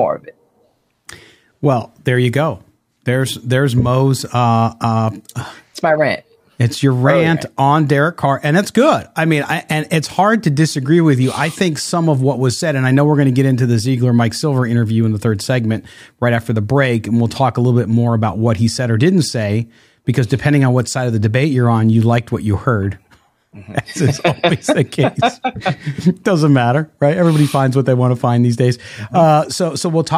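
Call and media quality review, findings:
No faults found in review.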